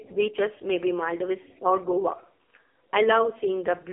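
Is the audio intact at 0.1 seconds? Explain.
No. At 0.1 s, as throughout, the AMR narrowband mobile codec, apparently at a very low bitrate near 5 kbps, cuts everything above 3.8 kHz, leaving thin, buzzy, synthetic speech.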